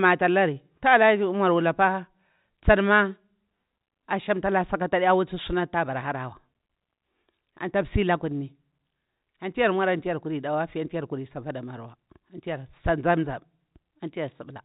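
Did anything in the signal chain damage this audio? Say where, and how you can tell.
No, nothing in the chain damaged this speech.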